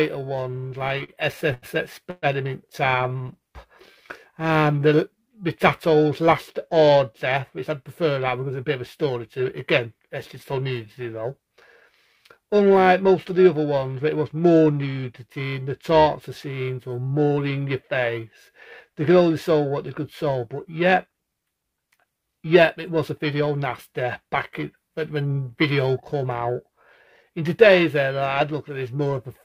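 Periodic clock jitter runs through the whole recording. Interference on the converter's sample clock, at a rate of roughly 1 kHz, puts sidebands about that far above and below every component of the sound. Higher-pitched content picks up more of them, which gives the audio a rough, metallic edge. Broadband noise would stay in the quiet moments, but this roughness is tied to the signal and disappears whenever the sound stops.

From 0.51 to 3.37 s there are repeated stalls (stutter). Packets kept arriving late, so the jitter buffer ran dry 17 times. Each time, the receiver held the last sound going until data arrived, filling about 403 ms in all, or 14% of that stretch. The longest hold lasts 123 ms. Nothing is actually lost, so the effect is a dragging, hiccupping stop-start rather than dropouts with holes in them.

Overlapping that, from 2.88 to 5.26 s, there is a jitter buffer slow-down. 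To rebuild its reserve, the receiver repeated single pitch periods and fragments of pauses many times in a row. That adds 129 ms and brings playback down to 95% speed. Unlike the stutter, the stretching is continuous. Sounds are drawn out at the same pitch, with no discrete freezes.

Jitter buffer speed-up appears from 7.29 to 10.37 s at 106% speed and again from 21.06 to 23.62 s at 107%. Each time the buffer was holding more audio than its target, so the receiver trimmed short slices of one or a few pitch periods, about 200 ms per stretch. The audio sounds hurried, but the pitch stays unchanged, which separates it from a simple playback-rate error that would raise the pitch as well.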